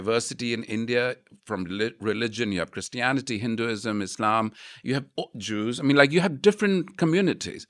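No technical faults can be heard anywhere in this speech recording; the signal stays steady and intact throughout.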